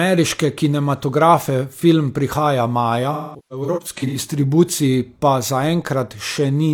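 Right after "kinematografe film prihaja maja", from 3.12 to 4.18 s, there's AAC frame loss with concealment: about 0.6 s of dropouts scattered through that second, runs up to around a fifth of a second. The decoder patches gaps from the last good spectrum, so it turns smeared and phasey until "distribuciji pa".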